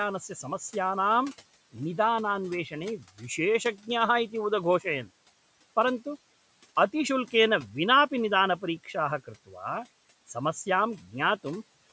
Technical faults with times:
9.46-9.56 speech cut by the noise suppressor

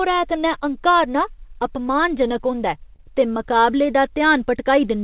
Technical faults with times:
2.96-3.01 short stall from a late packet

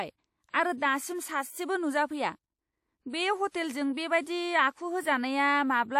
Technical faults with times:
0.50-0.81 pre-echo
3.49-3.54 pre-echo

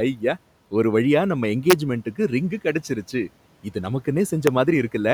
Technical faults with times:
1.70-1.73 integer overflow
4.47 integer overflow

